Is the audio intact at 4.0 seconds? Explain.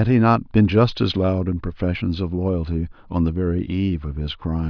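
Yes, at 4.0 seconds the speech runs intact, with no dropout, click, distortion or other technical fault audible at that point.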